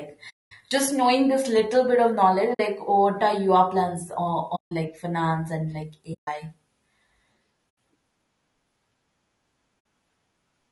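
From the start the speech sounds rough and grainy, with noise filling the gaps between harmonics and a thin, synthetic-sounding top band. This is plainly audible low-delay AAC compression, likely AAC-ELD at around 32 kbps, where too few bits are left to code the spectrum cleanly.

AAC frame loss with muting then cuts soft-edged holes into the speech: the decoder zeroes the missing spectrum and the overlapping windows fade each hole out and back in. They fall at 0.29 to 0.52 s (220 ms, just before "just knowing this little"), 2.53 to 2.60 s (60 ms, between "little bit of knowledge" and "what are your plans"), 4.55 to 4.72 s (160 ms), 6.13 to 6.28 s (140 ms, after "like finance and like"), 7.69 to 7.77 s (80 ms) and 9.79 to 9.85 s (60 ms).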